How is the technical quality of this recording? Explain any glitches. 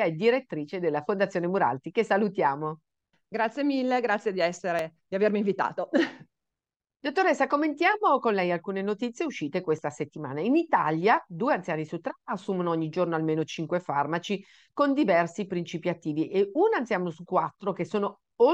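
The recording has one recurring glitch: audio missing between chunks. Three tiny skips land at 4.79 s, after "mille grazie di", at 9.79 s, after "lei alcune notizie uscite", and at 14.78 s, after "giorno almeno cinque farmaci". They repeat every 5 seconds. Each drops only a few milliseconds. The likely cause is a recorder working in 5-second blocks and losing a sliver at each handover. The sides are butted together with no silence, so each gap is heard as a brief skip.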